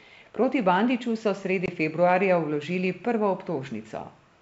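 A hard-edged silent hole opens at 1.66 s and lasts 20 ms, ending at 1.70 s, with the speech returning slightly distorted. This is packet loss on an ADPCM call, roughly one packet dropped from the G.722 stream and filled with silence. The decoder's adaptive predictor and step size then restart out of step with the sender's and take a few tens of milliseconds to realign.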